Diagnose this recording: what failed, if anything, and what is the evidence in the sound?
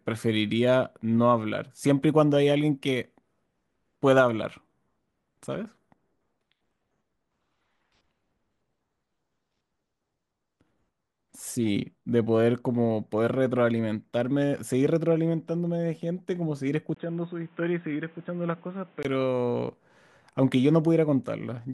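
From 16.9 to 19.0 s, after a 20 ms gap, the speech turns dull, nothing above 3.8 kHz, about 5 dB quieter. A new noise floor appears. Likely an input switched to a poorer device.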